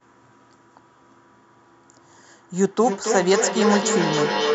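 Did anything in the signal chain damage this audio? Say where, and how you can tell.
Yes. Feedback howl starts at 2.55 s and runs to the end of the clip. Sound from one device's loudspeaker reaches a second device's microphone on the same call and gains level on each trip, so the loop narrows to a tone around 400 Hz. The loop repeats about every 300 ms, and the tone peaks at about 2 dB below the speech.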